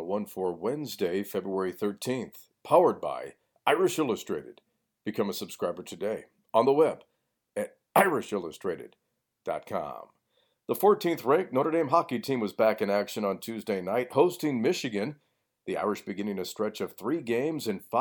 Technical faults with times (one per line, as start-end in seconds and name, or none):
none